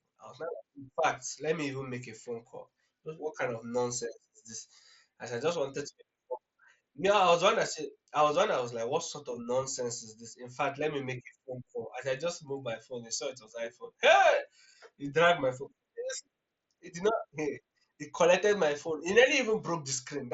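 No technical faults can be heard anywhere in this recording.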